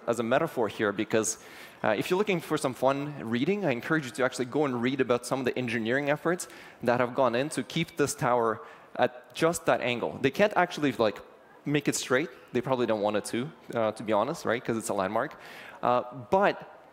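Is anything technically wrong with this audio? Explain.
No, nothing in this audio points to a technical fault; the signal holds steady throughout without any audible defect.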